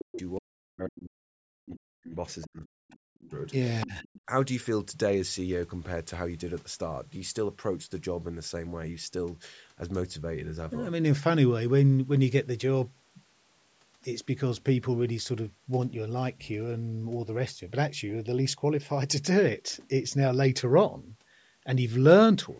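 Speech suppressed in double talk hits this call-processed speech at 0.0–0.2 s, 0.39–2.17 s, 2.45–3.35 s and 3.85–4.08 s, where the talker's level dips by as much as about 40 dB or cuts out in pieces. The likely cause is an echo canceller that could not tell the talker from the loudspeaker echo and turned both down. The other side's voice leaking through appears at 0.12–0.21 s, 2.41–2.47 s, 3.81–3.87 s and 4.03–4.21 s as brief scraps roughly 15 to 25 dB below the speech, likely residual loudspeaker echo the canceller failed to remove. The band-limiting from the call's microphone processing, with nothing above 8 kHz, is expected and not a fault.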